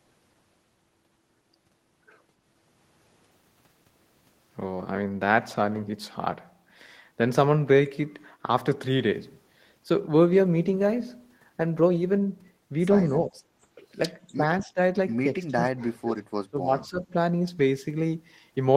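At 13.29 to 13.38 s the speech dips by about 15 dB. This is likely speech suppressed in double talk: with both ends speaking, the echo canceller pulled down the near talker along with the echo. On the waveform the envelope shows a brief notch, and the spectrogram thins there.

At 14.27 to 14.34 s a faint echo leak appears. It is a copy of the voice arriving 244 ms late and about 35 dB below it, likely loudspeaker pickup that the loudspeaker side's canceller failed to remove. On a spectrogram it shows as a weak, delayed repeat of earlier energy.

The same double-talk suppression returns at 14.36 to 14.42 s (about 5 dB down) and at 14.62 to 14.78 s (about 10 dB). From 15.38 to 16.2 s the level falls by about 30 dB and the speech nearly cuts out. At 16.51 to 17.14 s it drops by about 15 dB. Each shows as a hollow or gap in the waveform envelope and a faded stretch on the spectrogram.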